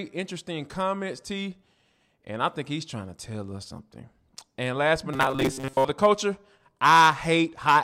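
A speech clip with robotic sound from repeated short buffers between 5.14 and 5.85 s, after "last but" and before "the culture". The voice becomes a rigid, metallic buzz near 134 Hz, likely from a roughly 7.5 ms buffer being replayed while most of the real audio is skipped.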